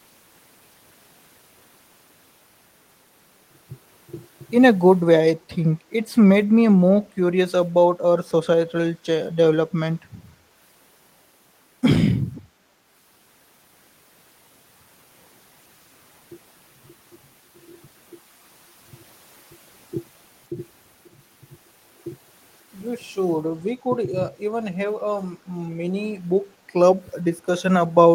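From 12.35 to 12.42 s an echo leak surfaces: a brief, faint repeat of the talker's speech arriving about 0.51 s late and sitting roughly 25 dB below the direct voice. The likely cause is a far-end loudspeaker feeding its microphone, with the echo canceller failing to remove all of it. On a spectrogram it appears as a weak, smeared copy of earlier harmonic bands, offset half a second, in the waveform a small ripple.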